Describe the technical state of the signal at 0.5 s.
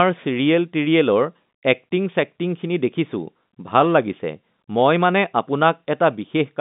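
At 0.5 s the audio is intact, with the speech passing through the G.711 telephone coding as a normal narrowband telephone signal and no fault present at that moment.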